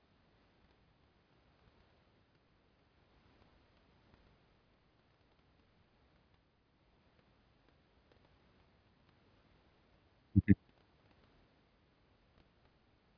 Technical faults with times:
none

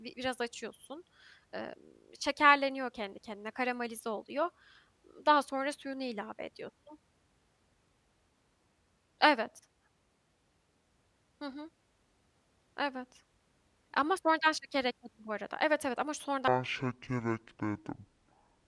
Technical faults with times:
16.48-18.67 wrong sample rate

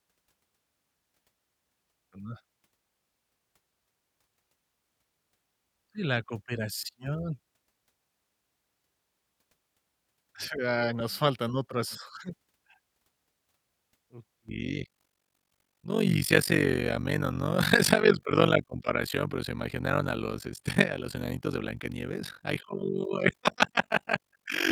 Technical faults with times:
14.49-24.71 overlap-add ripple

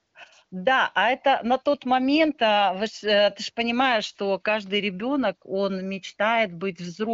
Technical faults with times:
none

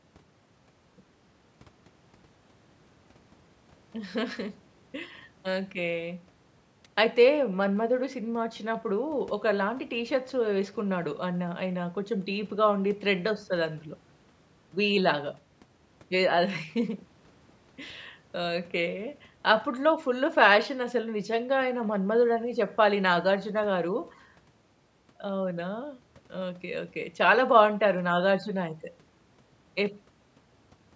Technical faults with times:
none

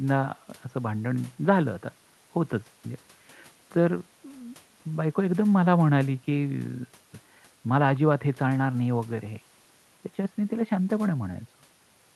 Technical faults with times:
none

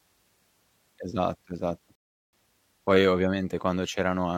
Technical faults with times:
1.95-2.33 rebuffering stall

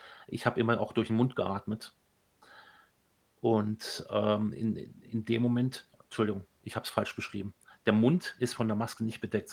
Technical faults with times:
none

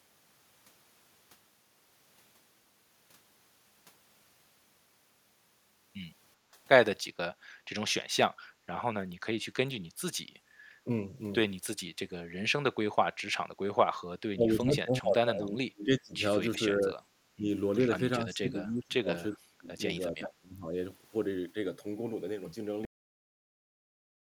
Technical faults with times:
6.37-6.54 background gated by the echo canceller
8.48-8.66 background gated by the echo canceller
10.39-10.57 background gated by the echo canceller
13.86-17.46 speech suppressed in double talk
18.18-20.75 speech suppressed in double talk
22.85-24.20 cut-off end

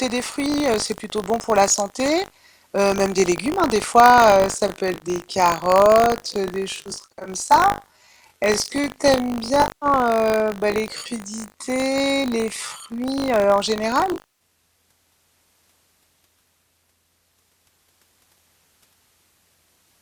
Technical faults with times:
0.00-20.01 buffer tearing
4.00-13.04 time-stretched section
4.94-5.04 AAC frame loss with concealment
6.82-7.29 AAC frame loss with concealment
9.62-9.86 AAC frame loss with concealment
14.13-14.27 AAC frame loss with concealment

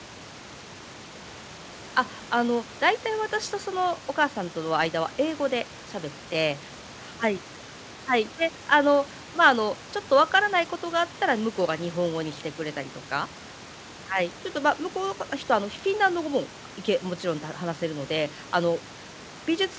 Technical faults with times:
none

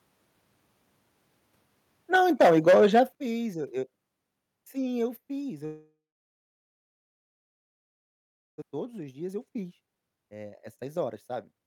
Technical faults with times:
2.14-3.00 microphone overload
2.16 microphone volume stepped down
3.15 microphone volume stepped down
5.65-8.64 long network dropout
8.71-11.67 jitter buffer speed-up

